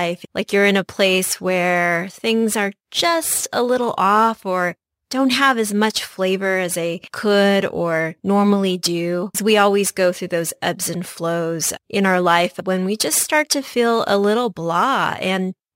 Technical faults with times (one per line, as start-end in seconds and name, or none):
0.00-15.76 crude rate conversion